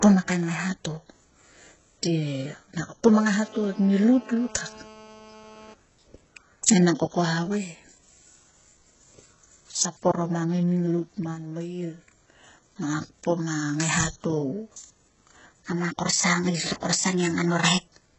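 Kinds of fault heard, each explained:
HE-AAC compression: The whole recording carries heavy codec damage. Nothing survives above 8 kHz, and the treble that remains is rebuilt from copied lower bands. S sounds come out gritty and metallic. This is likely HE-AAC at a very low bitrate, around 8 kbps.
GSM phone buzz: From 3.06 s to 5.74 s a hard, raspy buzz sits under the speech. It is about 24 dB below the voice. It pulses near 217 Hz with many harmonics, and it holds steady, as a nearby 2G phone on a call would.
section at the wrong speed: From 15.60 s to the end, the speech plays 1.12 times too fast. Pitch rises with it, by roughly two semitones. The voice sounds higher and more hurried, likely because this part was played against the wrong clock.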